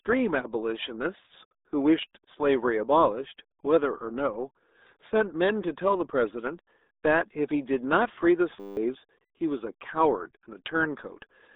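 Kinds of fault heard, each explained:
RealAudio 14.4 codec: The speech went through a dial-up era codec whose heavy data reduction fits an 8 kbit/s rate. It strips everything above 3.8 kHz and confines the sound to roughly 250 Hz to 3.7 kHz, leaving the voice muffled, thin and gargly throughout.
System hang loop: The computer stalled while the sound hardware kept replaying one 10 ms slice of its buffer. From 8.6 to 8.77 s that slice repeats exactly, producing a steady 100 Hz buzz that replaces about a sixth of a second of speech.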